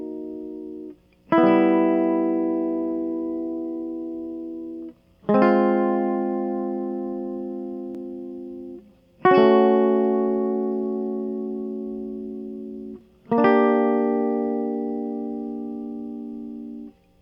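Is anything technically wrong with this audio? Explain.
No, nothing technically wrong here.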